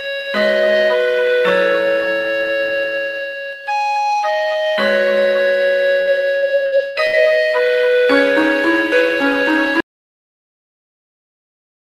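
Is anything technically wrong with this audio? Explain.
Yes, there are two faults. From 6.01 to 7.16 s, repeated packet loss leaves five gaps, the longest 61 ms. Each is patched by stretching the previous sound, so the result is choppy rather than silent. At 9.80 s the audio drops out to total silence, with no room tone, until the end. This was likely caused by a lost input, with silence written in its place.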